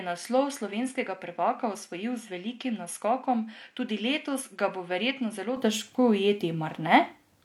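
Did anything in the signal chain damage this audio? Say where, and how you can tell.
Yes, at the input stage. Until 5.57 s, speech stops at 11.4 kHz, sits a few dB lower with its own background noise, then opens up with no gap. This is likely the input switched to a poorer device.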